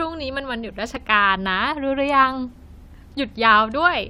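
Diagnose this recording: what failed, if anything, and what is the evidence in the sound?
The speech has two tiny skips, at 0.96 s and 2.94 s, spaced about 2 s apart. That regular spacing fits overlap between stream segments at the streaming or playback stage. Timestamps on adjacent 2-second segments overlap, so the player trims a few milliseconds of sound that was never duplicated, and the waveform jumps. Unlike a network dropout or buffer underrun, there is no gap of silence or stutter, just a brief skip.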